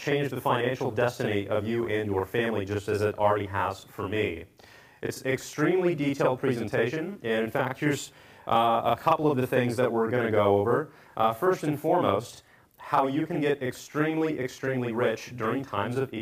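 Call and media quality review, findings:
Channel delay (doubling), throughout. Every onset is followed by a same-level copy 40 ms later, heard as a slap/doubling. Probable component: capture or mix stage where one channel runs a buffer late before the mono sum.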